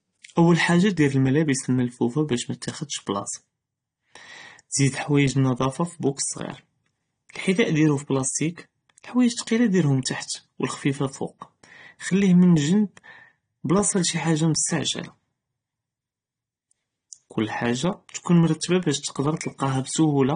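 From start to finish the speech has nothing above 9.7 kHz and sounds dull and smeared, with a fizzy, warbling edge on sibilants. The likely cause is AAC compression: coarse AAC-LC quantisation at a bitrate that points to around 32 kbps, cutting the top band.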